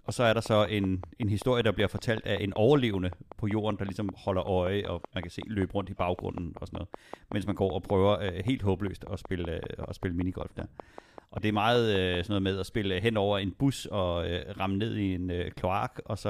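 From about 0.09 s to 12.35 s there's a train of clicks, a steady ticking at around 5.2 per second, some seventy near-identical pops standing roughly 10 dB above the speech and running through pauses too, ending just before "med at spille hen". The likely cause is interference from nearby gear or a faulty connection or power supply.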